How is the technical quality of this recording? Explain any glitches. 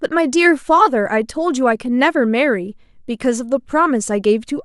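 The technical quality of the recording holds up, with no glitches to explain.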